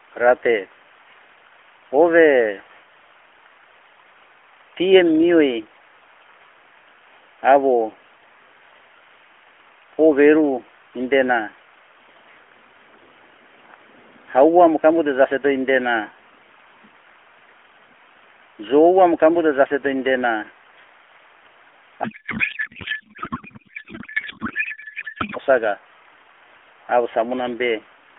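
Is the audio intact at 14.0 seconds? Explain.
Yes, the audio is intact at 14.0 seconds, with no fault at that moment.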